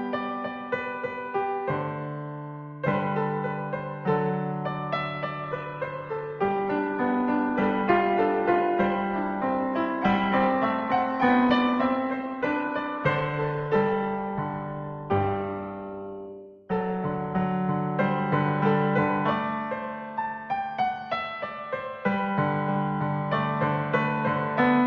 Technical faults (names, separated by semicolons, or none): adaptive stream at a lower bitrate